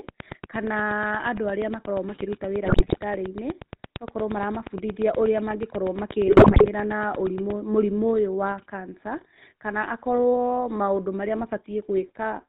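Throughout the clip the speech has a buzzy, gravelly roughness and no content above 4 kHz, so it sounds narrow and grainy. This is the GSM full-rate codec, and the damage is plainly audible. The codec models the vocal tract and drives it with a sparse, regularly spaced pulse excitation that keeps only every third sample, which fits the 13 kbps full-rate scheme. The coarse excitation produces the buzz, and the 4 kHz ceiling removes the upper band.

From 0.09 s to 7.51 s a steady ticking runs over the sound at about 8.5 clicks per second, roughly seventy in all, evenly spaced and much the same in shape. The clicks come through during pauses as well, and their peaks sit well above the speech level. The ticking stops just before "mũrimũ ũyũ wa". This train of clicks is likely pulse interference from nearby equipment or a faulty connection.

From 2.64 s to 2.98 s and again from 6.26 s to 6.67 s the speech breaks up into squawks, pops and gargling. 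These are GSM bit errors. Bits flipped on a weak link reached the decoder and corrupted the filter, pitch and gain values it rebuilds the speech from. Each damaged frame comes out with a bent spectrum or a blown-up level.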